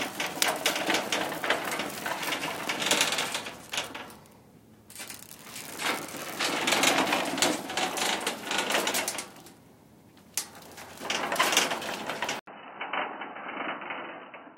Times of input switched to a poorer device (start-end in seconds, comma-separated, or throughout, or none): 12.39-14.57